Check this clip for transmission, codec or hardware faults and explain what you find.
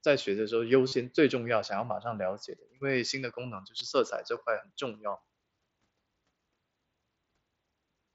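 Two short dropouts carried over the mSBC Bluetooth headset link show concealed Bluetooth headset packet loss, at 0.88 to 0.92 s and at 3.79 s. Lost headset packets were patched by repeating recent waveform, leaving brief buzzy, held tones with a slight warble where the real sound resumes.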